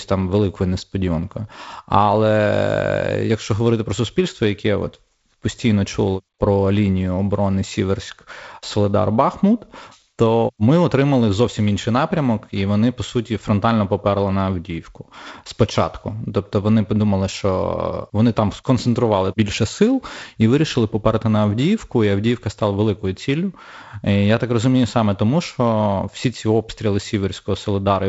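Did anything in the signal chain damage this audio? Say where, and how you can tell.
No, nothing in the signal chain has damaged this speech. What can be heard is the G.722 wideband telephone coding working as intended: the audio stops at about 7.7 kHz, and a light grain in the lower band fits the codec's 48 kbit/s mode.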